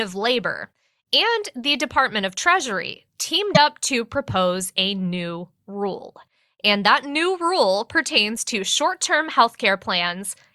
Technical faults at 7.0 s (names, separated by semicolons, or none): none